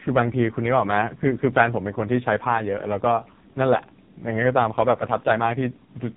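The speech has passed through an AMR narrowband mobile codec under heavy compression, its pitch-and-pulse vocal model starved of bits, which fits the 4.75 kbps mode. Nothing above 3.8 kHz survives, so the voice sounds muffled, buzzy and synthetic from start to finish.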